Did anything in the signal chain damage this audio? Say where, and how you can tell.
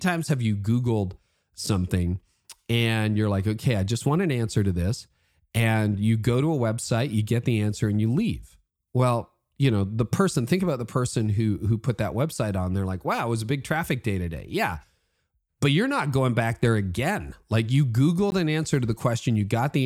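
Yes. The driver or buffer stage failed to fill its output buffer in time twice, leaving blocks of digital silence in this speech at 1.66 s (5 ms, which fits a 256-sample buffer) and 18.3 s (16 ms). The signal drops straight to silence and back, so the first gap is heard as a tick and the second as a short hole.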